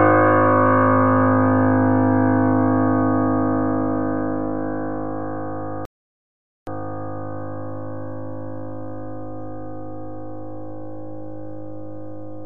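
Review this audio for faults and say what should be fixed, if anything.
A rebuffering stall runs from 5.85 s to 6.67 s: the sound drops abruptly to silence for about 0.82 s, then picks up exactly where it left off, so nothing is missing but the clip runs that much longer. The player exhausted its downloaded audio and waited for more data before continuing. On a waveform this shows as a flat line with hard edges on both sides; a spectrogram shows an empty vertical band across all frequencies. To prevent it, buffer more audio ahead of playback or lower the streaming bitrate when the network slows.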